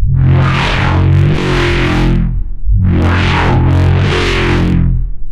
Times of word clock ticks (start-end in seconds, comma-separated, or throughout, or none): none